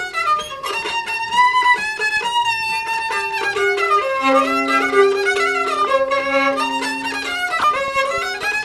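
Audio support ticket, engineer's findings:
DAB burbling, 5.79–5.89 s and 7.59–7.88 s: brief noise blips. Weak reception lets stray bit errors through to the MP2 frames, so individual sub-bands get short blips of noise.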